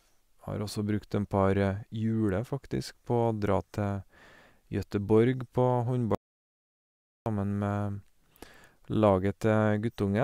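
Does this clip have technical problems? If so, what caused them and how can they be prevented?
Yes. At 6.15 s the speech cuts off mid-flow into complete silence, with no room tone or background underneath, and it resumes abruptly at 7.26 s, so about 1.1 s of the speech is simply missing. This audio dropout to silence is likely the input going dead for that stretch, through a loose connection, a failed link or an accidental mute, while the recorder kept writing silence. Secure cables and wireless links, and monitor the input live so any loss of signal is caught during the take.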